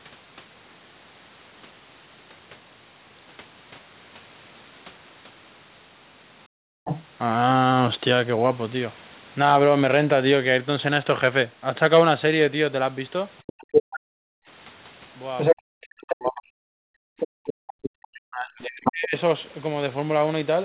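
At 6.48 s the room tone behind the speech falls away abruptly, dropping by about 40 dB and staying gone until 6.85 s. This is background gated by the echo canceller: with the loudspeaker active, the canceller clamped the microphone hard, so the ambient floor vanished for roughly 0.4 s instead of being cleaned. The same hole in the background recurs from 14.0 to 14.47 s and from 17.16 to 17.68 s, each time about 40 dB deep.

Right as the first gate releases, from 6.85 to 7.07 s, a second voice slips through, sitting about 10 dB under the main talker. A much stronger stretch runs from 13.38 to 15.55 s, where the intruding voice is roughly 5 dB louder than the talker, and another from 17.19 to 18.92 s at around 5 dB below. This is the other side's voice leaking through, likely because the echo canceller left part of the far end's loudspeaker playback in the microphone signal.

From 15.53 to 19.14 s the talker's own speech repeatedly sinks and breaks up, losing around 40 dB at its deepest and totalling about 2 s of damage across that span. 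This is speech suppressed in double talk: with both sides speaking together, the canceller likely could not tell its talker from the echo and pushed everything down. Throughout, nothing sits above 4 kHz, consistent with a narrowband call codec.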